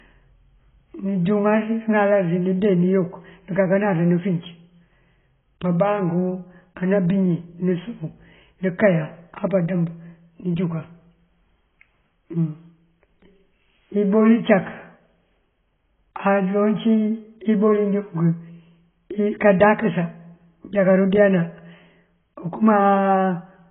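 AAC compression throughout the speech: nothing above 3.8 kHz, and a dull, smeared, warbling texture, likely from a starved encoder, which fits roughly 16 kbps.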